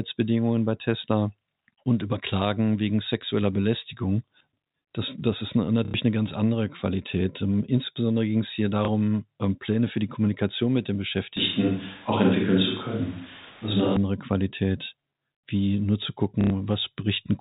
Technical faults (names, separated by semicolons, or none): packet loss with last packet repeated; switch to a distant microphone